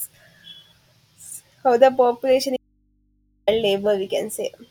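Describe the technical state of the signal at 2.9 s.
The input was likely cut while the path stayed live, causing an audio dropout to a faint residue from 2.57 to 3.47 s: after "the population", only hum remains, about 45 dB down.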